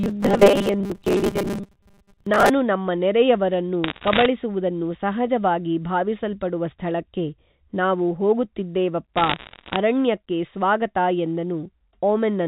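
From the start, about 0.01 s, until 2.5 s, the speech has the robotic sound from repeated short buffers: a rigid, metallic buzz at 200 Hz that still loosely tracks what's being said. That pitch fits a 5 ms slice being looped over and over, likely because new audio wasn't arriving often enough, so the playback kept recycling the last chunk and roughly half the material you'd expect got skipped.

Then from 3.84 to 4.26 s, and again from 9.17 to 9.76 s, you get bit errors on a digital phone line. The speech underneath stays intact, but a scatter of sharp ticks and crackle rides over it, with an error rate of around one percent. Each flipped bit corrupts a single sample, and the hits on the sign or upper bits are the ones that pop out loudly. The G.711 mu-law telephone coding itself sounds as expected, with the narrow band that stops at 4 kHz.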